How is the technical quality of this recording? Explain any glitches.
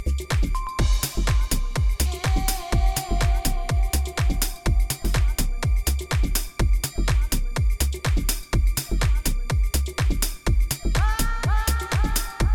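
No glitches or technical faults can be heard here.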